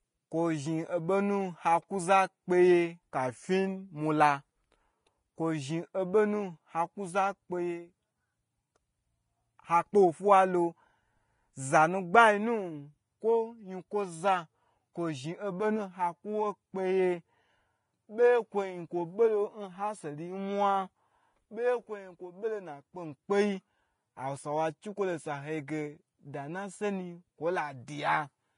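A block size mismatch (truncated) runs through the whole speech clip. One stage writes longer blocks than the next one reads, so the tail of each block is dropped. This leaves a steady buzz at 46.9 Hz, which fits 1024-sample blocks. The pace stays close to normal.

The clip also sounds like low-bitrate audio saved at a high bitrate. Nothing is present above 10.5 kHz, and the earlier coding damage remains. This likely comes from a low-bitrate Vorbis encode, around 29 kbit/s, later re-saved as a 320 kbit/s MP3.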